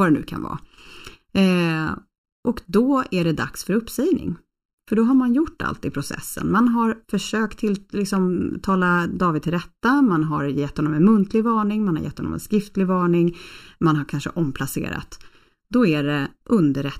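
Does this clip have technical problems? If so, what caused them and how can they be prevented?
Yes. Channel delay (comb filtering) runs throughout: one channel arrives about 0.7 ms late, and summing to mono cancels shared content from around 700 Hz upward at evenly spaced frequencies, making the speech hollow and phasey. Aligning channels before any mono fold-down prevents this.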